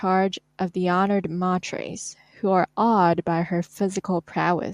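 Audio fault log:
No technical faults are present in this speech recording.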